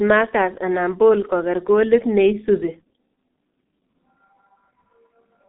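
From the first moment to the end, the speech carries the sound of the G.723.1 codec, and it's heavily damaged. Everything above about 3.8 kHz is gone, and the low end thins out below roughly 200 Hz, so it's muffled and boxy. The codec models the voice in coarse 30 ms chunks at a very low rate, consistent with around 6 kbit/s, so the tone turns hoarse and buzzy and consonants smear together.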